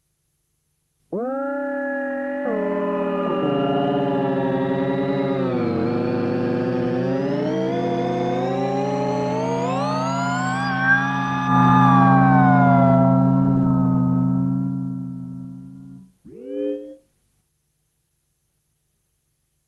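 No faults can be heard in this recording of sounds, which carries the ordinary coding character and reduced high end of a WebRTC call path, consistent with an Opus link working as intended.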